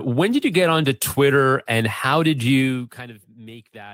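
No technical faults are audible in this speech recording.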